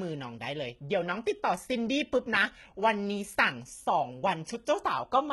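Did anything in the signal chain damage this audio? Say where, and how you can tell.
Yes, at the codec stage: likely HE-AAC compression near 16 kbps, whose replicated treble leaves s sounds gritty and metallic throughout the speech.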